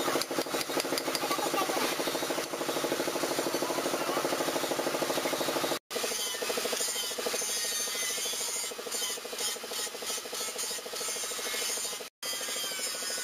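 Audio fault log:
Throughout: imaging from sample-and-hold upsampling. Each sample was held rather than smoothed when the rate was raised, which fits a 16 kHz source. Mirror copies fill 8 to 16 kHz at about 9 dB below the sound, giving a bright metallic fizz that tracks its level.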